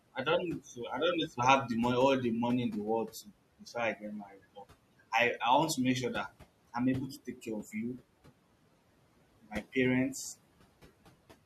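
Noise suppressor artifacts run through the whole recording. The room noise, about 19 dB below the speech, gets pushed down by about 18 dB between phrases and rises again under the words. Speech cut by the noise suppressor happens at 3.11 to 3.31 s and again at 4.25 to 4.38 s. The suppressor mistook quiet bits of speech for noise, with dips of about 15 dB and about 11 dB, so those sounds come across swallowed and faint.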